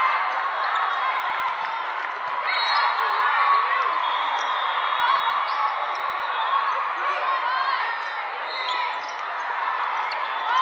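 Brief jumbled stutters occur at 1.2 to 1.4 s, 3.0 to 3.2 s, 5.0 to 5.3 s and 6.0 to 6.2 s. These are chunks out of order: a 100 ms chunk plays one slot late, or two slots late at 5.0 s, leaving three hard joins.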